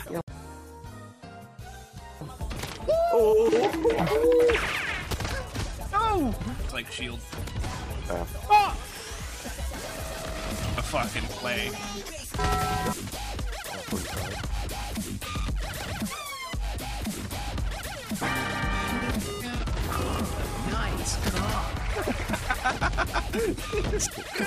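Nothing here to flag: you can listen all the way through without hearing a single technical problem.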